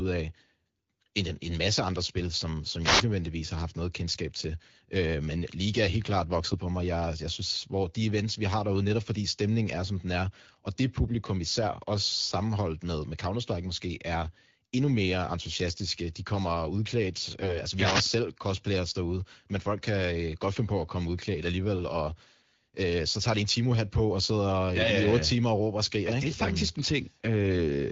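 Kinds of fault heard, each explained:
Wireless microphone noise hit: brief swishes of static near 2.8 s and 17.7 s, as reflections cancel the FM radio signal and receiver noise rises.
AMR bit errors: short hoarse, gargly scratchiness around 15.5 s and 17.4 s, from flipped less-protected AMR bits that misplace excitation pulses and skew pitch, gain and spectrum.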